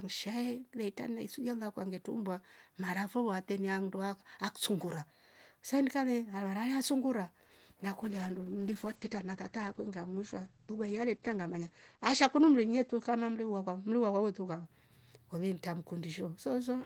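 A call bitrate drop hits this speech from 8.02 to 14.71 s: the encoder falls from 32 to 11 kbps, trimming bandwidth from 20 kHz to 8 kHz, so it turns muffled and rough for about 4.8 s.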